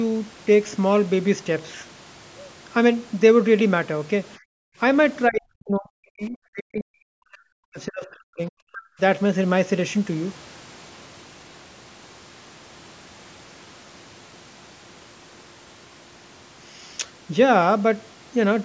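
From 4.38 to 4.78 s the room sound behind the speech collapses, falling by about 40 dB for roughly 0.4 s before coming back. This is background gated by the echo canceller: while far-end audio was playing through the loudspeaker, the canceller pulled the microphone gain down hard to keep echo out, taking the ambient noise floor with it. The result is a brief, audible hole in the background.

Between 5.28 and 9.0 s the near-end speech repeatedly dips and breaks up, with drops of around 40 dB adding up to about three seconds of affected audio. The likely cause is speech suppressed in double talk: with both sides talking at once, the echo canceller could not tell the local talker apart from loudspeaker echo and attenuated everything. The speech sounds choppy, pumping in and out in fragments. The band-limiting to 8 kHz comes from the call's microphone processing and is expected.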